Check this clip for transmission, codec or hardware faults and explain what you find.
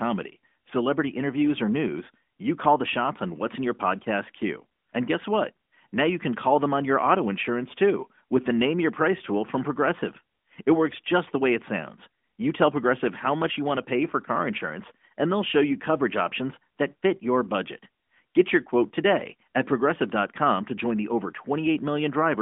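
Nothing here points to a fault: the speech arrives over an AMR narrowband mobile codec path at 12.2 kbps, limited to the 200 Hz to 3.5 kHz line band and carrying only the light coloration that this codec leaves at that rate.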